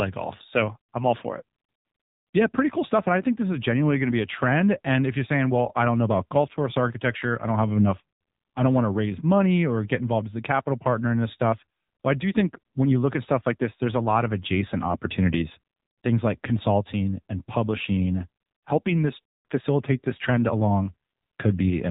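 Speech passed through the AMR narrowband mobile codec for its whole length, with plainly audible coding damage from a vocal-tract model and sparse pulse excitation. Nothing above 3.8 kHz survives, and the damage level fits a low AMR-NB mode near 7.4 kbps.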